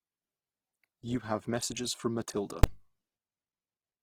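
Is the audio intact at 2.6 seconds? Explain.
No. At 2.64 s invalid numbers at full scale: a calculation overflowed and the output was pinned at one extreme value for about 5 ms, which fits a 256-sample block. It is heard as one sharp bang, not a quiet click or a dropout. Across the whole clip, including this moment, the speech also sounds grainy and rough, likely from Opus compression at a low bitrate of roughly 16 kbps, with no muffled narrowing or swirly holes.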